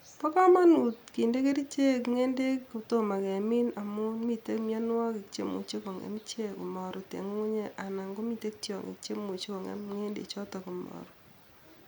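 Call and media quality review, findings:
No technical faults were found in the speech signal, so there is nothing to log against any component.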